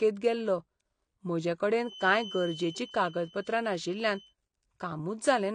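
Speech runs the whole clip with a dull, smeared quality and plainly audible codec damage: nothing comes through above 9.6 kHz, and sibilants carry a warbling, fizzy texture. This is likely AAC compression, and the sound fits AAC-LC at around 32 kbps. At that rate the encoder quantises each frame's frequency lines against a hearing model, lowers the cut-off, and either leaves gaps in the spectrum or fills bands with substitute noise. From 1.77 to 4.36 s a thin, steady whistle at 3 kHz sits behind the speech, roughly 20 dB below it, slowly swelling and fading. This is likely a feedback whistle: the loudspeaker-to-microphone loop hovers at the edge of instability, so one frequency keeps ringing at low level without building into a full howl.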